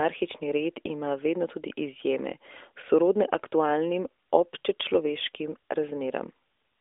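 No technical fault can be heard in this speech clip. The sound has the narrow phone band of the AMR narrowband mobile codec, roughly 300 Hz to 3.6 kHz with nothing above 3.7 kHz, and its light coding texture fits the 12.2 kbps mode.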